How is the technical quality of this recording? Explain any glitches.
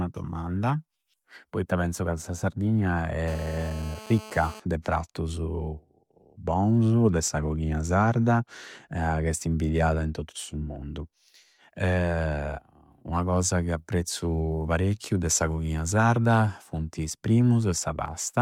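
The recording is marred by one glitch, GSM phone buzz from 3.28 to 4.60 s: a nearby 2G phone on a call, bursting 217 times a second, gets rectified by the audio circuitry, laying a steady, raspy 217 Hz buzz about 18 dB below the speech.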